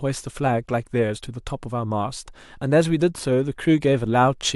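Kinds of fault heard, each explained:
No technical faults can be heard in the speech.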